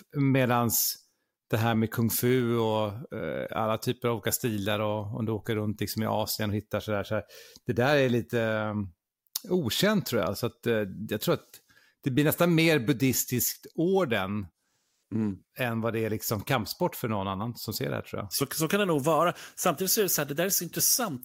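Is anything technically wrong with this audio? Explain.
No, nothing technically wrong turns up anywhere in this speech recording, so there's nothing here to flag.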